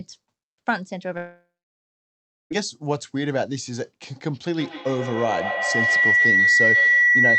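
From 1.17 to 2.52 s the speech gives way to a fading buzz and then about 1.05 s of silence, likely a long network dropout. The lost audio never returns, unlike a brief glitch. From 4.5 s to the end a feedback howl builds near 2 kHz, with repeats roughly every 150 ms, peaking about 6 dB above the speech. It grows rather than decaying like echo.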